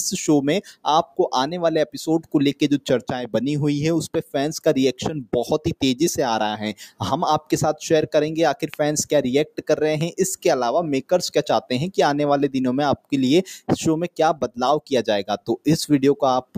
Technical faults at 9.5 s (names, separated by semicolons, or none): noise suppressor applied to music or sounds; sound cut by the noise suppressor